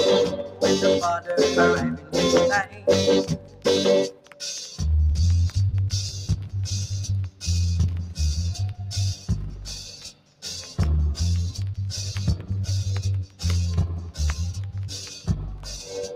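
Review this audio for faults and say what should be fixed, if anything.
Noise suppressor applied to music or sounds, throughout: a speech-oriented suppressor treats steady, sustained material as noise, so the level swings by around 10 dB and the sound pumps.

Sound cut by the noise suppressor at 0.37–0.63, 1.94–4.41, 9.16–10.43, 13.26–13.41, 14.01–14.19 and 14.94–15.68 s: held or fading sound sinks by about 9 to 11 dB while sharper onsets pass.

Disable speech noise suppression for non-speech sources, or bypass it whenever music or ambient sound is captured.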